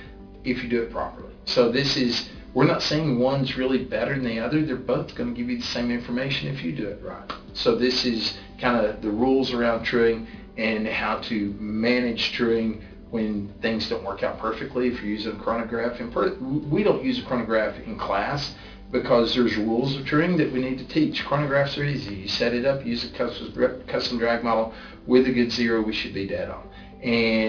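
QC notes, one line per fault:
Throughout: aliasing. The sound was resampled down without an anti-alias filter, which fits a drop to an 11 kHz rate, so everything above 5.5 kHz folds back below that point as unrelated, inharmonic tones about 15 dB under the signal. High content turns gritty and metallic, and the spectrum stays full right up to 5.5 kHz. Plain band-limiting would instead sound dull, with a clean roll-off and no added tones.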